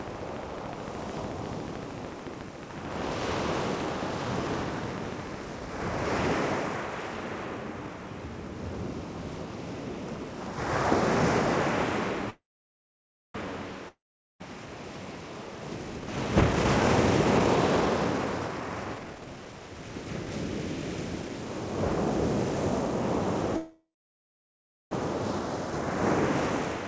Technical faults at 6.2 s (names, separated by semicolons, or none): none